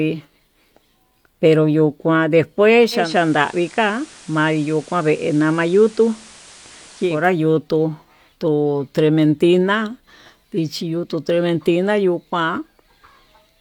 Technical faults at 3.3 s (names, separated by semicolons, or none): digital radio blending to analogue